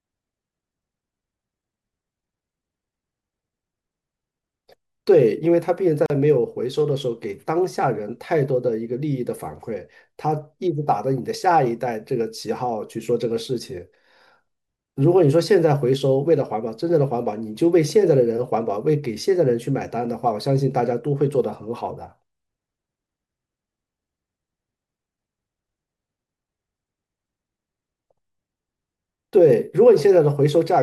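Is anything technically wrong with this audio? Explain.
Yes. At 6.06 s, a gap at a join of encoded pieces opens: a gap of about 40 ms with smeared edges, so the silent part is shorter. Leftover encoder delay and padding cause it. The speech then resumes.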